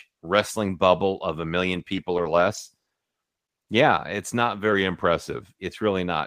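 From 1.74 to 3.01 s the speech turns choppy, with small pieces dropping out. This is repeated packet loss: eleven brief gaps, none longer than 30 ms, each patched by stretching the preceding sound, about 170 ms filled in total.

Between 4.72 and 5.41 s the speech runs about 5.5% slower and sags about 98 cents, nearly a semitone. A drift correction step is the likely cause, with clock-matching software briefly shifting the playback rate to rebalance its buffer.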